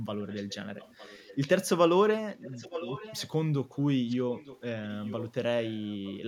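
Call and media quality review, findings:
Echo leak, speech: delayed copy of the voice trailing the direct sound by 907 ms at 0.27–0.56, 0.75–1.69, 2.33–3.29, 4.09–4.60, 4.83–5.32 and 5.65–6.14 s. Faint early (about 25 dB down), loudest near 2.3–3.3 s (about 10 dB down). Likely cause: far-end speakerphone echo canceller leaving residue. Unlike room reverb, the repeat is a discrete, fixed-delay copy, not a smeared decaying tail.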